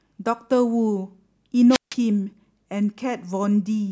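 A wireless microphone squelch dropout occurs from 1.70 to 1.95 s in this speech. The analogue radio link fades, hiss briefly rises, then the receiver's squelch mutes the output for about 0.16 s, leaving a near-silent hole before the voice returns.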